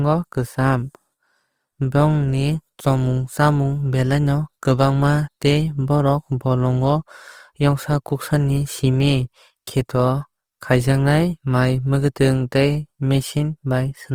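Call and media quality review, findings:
Speech grainy and rough throughout, not swirly; full bandwidth kept, content reaching about 20.3 kHz. Likely Opus compression in music mode: band energies held, starved bands filled with folded or noise texture, consistent with roughly 24 kbps.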